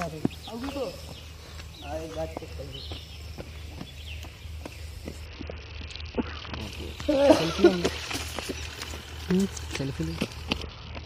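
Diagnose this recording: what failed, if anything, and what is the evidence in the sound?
Codec stage: Bluetooth SBC bit pool drop at 5.26–6.61 s and from 10.62 s onward. Starved upper sub-bands dull the treble, and coarse quantisation adds gritty noise.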